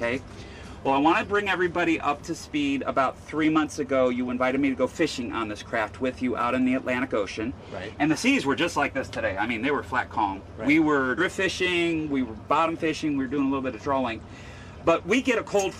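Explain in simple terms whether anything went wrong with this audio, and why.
Yes, one thing went wrong. At about 11.17 to 11.2 seconds there is a case of compressed frames skipped. The file stores sound in small chunks called frames. Here roughly one chunk never got played, so the sound jumps ahead by about a twentieth of a second. The gap fits frames about 46 ms long.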